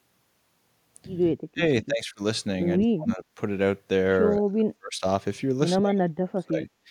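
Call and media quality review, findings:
Speech suppressed in double talk, likely from the echo canceller's suppressor: 1.35–1.62 s, 1.83–2.21 s, 2.79–3.24 s, 4.39–5.05 s, 5.80–6.69 s. Talker ducked by roughly 25 to 40 dB, deepest in the last span. Canceller cannot separate near speech from loudspeaker echo during overlap and attenuates both. Distinct from packet loss: level dips tracking the far side's activity, no clicks or robotic fill.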